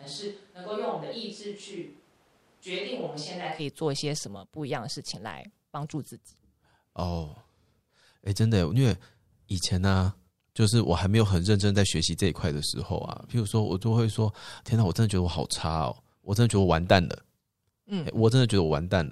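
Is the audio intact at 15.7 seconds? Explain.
Yes, the speech at 15.7 seconds is intact, with no audible fault at that moment.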